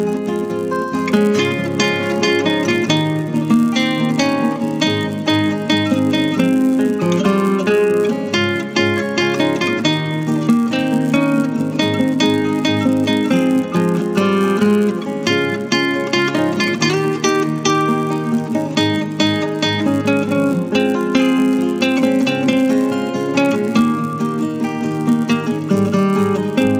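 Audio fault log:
Throughout: resampler restarted on every block. A buzz at 100 Hz sits under the sound and is present only while there is signal, falling away in silence. The conversion up from 16 kHz to 48 kHz was done block by block, with each 10 ms block handled on its own. At each block edge the converter lacked the true neighbouring samples. So every edge carries a small error, and these repeat 100 times per second, fusing into the buzz.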